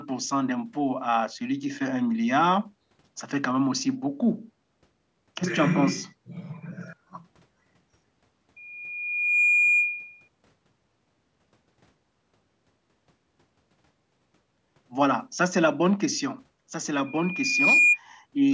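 At 8.56 s a loudspeaker feedback squeal begins. A single tone near 2.4 kHz swells over about a second and sits a few decibels above the speech. It stops at 10.28 s. The microphone is hearing the loudspeaker it drives. At that one frequency the loop gain passes one, so the tone feeds itself. It returns at 17.06 s, rising faster, in well under a second. This time it is clearly louder than the speech, and it ends at 17.99 s.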